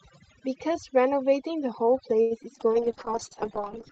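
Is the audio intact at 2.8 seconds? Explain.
No. From 2.73 s to 3.92 s, a call bitrate drop cut the encoder's budget, and the coarseness fits a fall from 32 to about 7 kbps. At 2.8 s the speech sounds rough, watery or muffled. Overdone noise removal, running throughout, also suppresses bands near its noise estimate, leaving near-silent gaps with twinkling specks.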